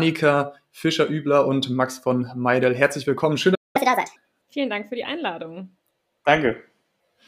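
A playback stall at 3.54 s silences the speech mid-flow for about 0.2 s, until 3.76 s, when it resumes. The likely cause is that the player ran out of buffered data or its output thread was briefly blocked, so nothing reached the output.

Catch-up at higher speed follows from 3.76 s to 4.16 s. The player resamples its backlog to run at 1.5 times normal speed, so the speech sounds hurried and raised in pitch by roughly seven semitones. It then drops back to normal once the lost time is recovered.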